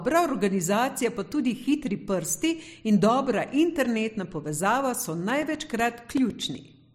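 From 5.30 s to 6.80 s the speech picks up a steady ticking, a small click every 0.125 s, so about eight per second and roughly fifteen in all, heard only where there is signal. These are periodic USB or driver dropouts. Something was stalling the USB bus or the audio driver on a fixed schedule, and at each stall a couple of milliseconds of audio went missing and was filled with silence. The abrupt gaps in the waveform produce the evenly spaced ticks.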